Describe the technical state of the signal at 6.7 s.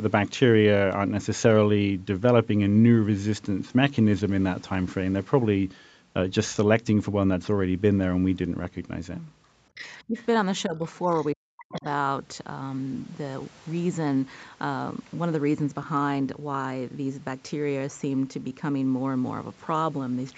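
At 6.7 s the speech is intact, with no dropout, glitch or distortion; it carries only the limited bandwidth of the call path, with nothing above about 8 kHz.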